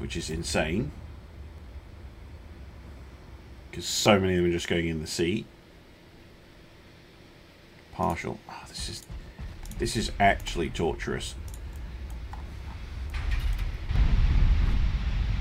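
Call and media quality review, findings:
Audio missing between chunks: brief skips at 1.58, 4.06, 11.48 and 13.96 s, about a few hundredths of a second lost each, on a grid of about 2.5 s. Likely a capture or processing chunk boundary. Joined with no silence, unlike a muted dropout.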